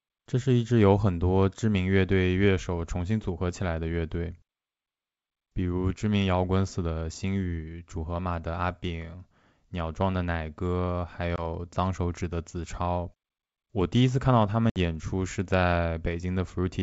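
At 11.36 s the G.722 wideband call loses a single packet, leaving a 20 ms gap of silence with hard edges. The disturbance lasts until 11.46 s, because the ADPCM decoder's predictor and step size have drifted from the sender's, so the sound resumes with brief distortion before settling. At 14.70 s a longer 60 ms hole, about three packets, produces the same pattern through 14.78 s.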